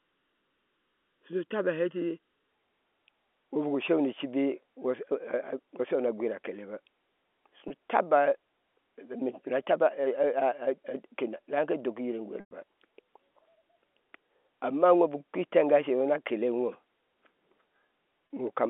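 The clip is telephone-band speech carried over G.711 coding, with two kinds of fault. From 0.0 to 2.51 s there is channel delay (comb filtering). One channel arrives under a millisecond late, and the two are summed to mono. Cancellation then cuts evenly spaced notches into the spectrum, the first somewhere around 700 Hz. The speech sounds hollow and phasey. Packet loss with pitch repetition occurs three times: 7.68 to 7.70 s (20 ms lost), 12.40 to 12.51 s (110 ms), and 18.27 to 18.30 s (30 ms). The receiver fills each gap by repeating the last pitch period. The two short losses sound like a briefly held, buzzy tone. The 110 ms loss is long enough to fade into silence before the speech cross-fades back in.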